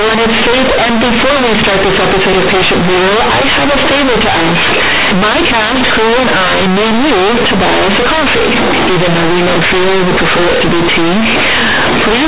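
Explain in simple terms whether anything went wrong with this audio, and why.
Companded audio read as linear runs throughout this speech: A-law telephone bytes were played as plain 8-bit samples without expansion, so quiet parts blast as loud, buzzy distortion and pauses fill with noise.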